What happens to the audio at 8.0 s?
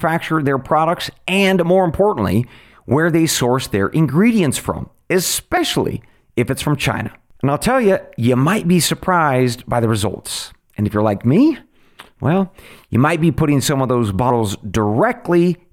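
At 8.0 s the speech continues without any audible fault; the audio is intact at that moment.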